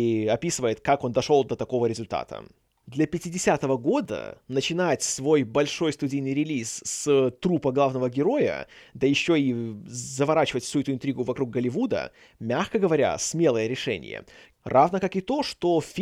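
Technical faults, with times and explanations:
4.05 s, block of digital silence: the output briefly dropped to silence for about 2.3 ms, just before "начинать свой большой студийный", which points to a buffer that was not filled in time. Because the speech cuts to silence and resumes with no fade on either side, the two hard edges merge into a single tick or dip rather than an audible gap.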